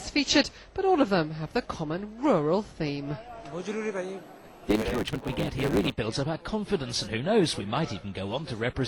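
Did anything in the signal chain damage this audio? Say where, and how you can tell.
Yes. From 4.65 to 5.92 s, a block size mismatch (truncated) at the driver or buffer stage clips each block's tail, which fits 512-sample blocks. This adds a 109 Hz buzz and runs the sound 1.16 times fast at normal pitch. The waveform shows splices every 9.2 ms, and the spectrogram shows lines spaced 109 Hz apart.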